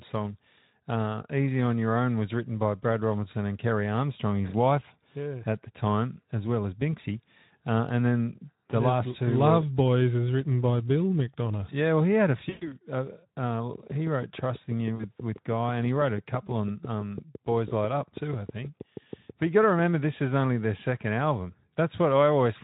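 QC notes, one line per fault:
12.49–12.77 s, 14.95–15.05 s, 17.69–17.73 s: VoIP packet loss concealed by the speech codec. The sound smears into a buzzy tone or coloured noise that fades out. The first gap follows "well he had a" and lasts 120 ms, which fits six lost 20 ms frames; the others last 40 ms and 20 ms. The decoder stretched its last pitch and filter with falling gain, so it recovers slowly once packets resume.
13.75–19.80 s: train of clicks. About forty near-identical ticks at a steady 6.13 per second, peaking about 5 dB above the sound, ending just before "this is only their". The likely cause is nearby interference or a faulty connection or power supply injecting repeated pulses.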